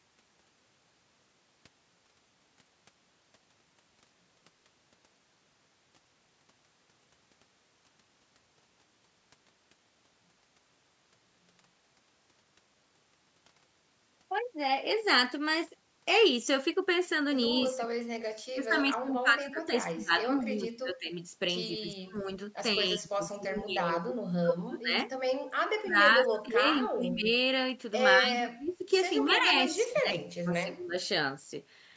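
A speech recording whose second half repeatedly loses level in the pattern of speech suppressed in double talk, from about 17.75 to 21.16 s, 21.78 to 24.95 s, 25.81 to 27.31 s and 28.17 to 30.96 s. The voice sinks by roughly 20 to 30 dB in patches, adding up to roughly 1 to 3 seconds per stretch. The likely cause is an echo canceller that, with both ends talking, could not tell this talker from loudspeaker echo and attenuated everything. On a waveform the envelope collapses in uneven chunks, and on a spectrogram the harmonics fade or break into gaps, with nothing above 8 kHz throughout, as expected from the call's band limit. Inside these suppressed stretches are brief scraps of echo leak at 27.23 to 27.27 s, 28.66 to 28.73 s and 29.30 to 29.36 s. Each is a faint copy of the voice trailing by about 143 ms and sitting around 25 to 35 dB below the speech, likely residue that the loudspeaker side's echo canceller failed to remove. 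On a spectrogram these appear as weak fragments repeating the preceding energy at a fixed offset of about 143 ms.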